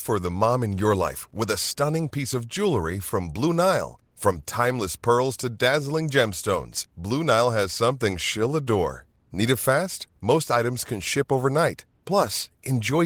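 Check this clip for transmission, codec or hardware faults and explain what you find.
Nothing stood out on listening to this speech clip; there was no transmission, codec or hardware problem to report.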